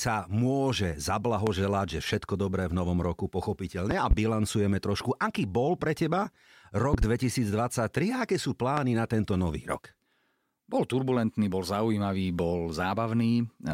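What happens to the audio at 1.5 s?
A loud pop hits from 1.47 to 1.51 s, likely a sudden voltage pulse from a plug, switch or static, heard as one sharp thump standing well above the speech.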